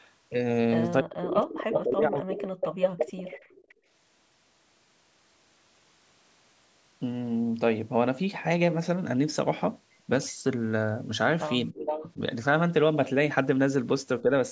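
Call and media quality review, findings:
Speech suppressed in double talk, 1.01–2.48 s, 11.72–12.18 s, 14.22–14.30 s. Drops of about 35, 15 and 5 dB, likely the echo canceller muting the near talker when both sides overlap. Waveform shows envelope notches, and the spectrogram shows the upper bands thinning.

Echo leak, 1.62–1.84 s, 2.43–3.74 s, 11.86–12.11 s. A delayed copy at 302, 310 and 364 ms, about 5 dB under the speech, likely from residual loudspeaker pickup the canceller missed. Spectrogram shows harmonic traces repeating after a fixed offset.

Background gated by the echo canceller, 3.74–3.88 s. The room floor drops about 16 dB for roughly 150 ms as the canceller clamps the microphone. Waveform and spectrogram show a brief gap where the noise floor dips, then it returns.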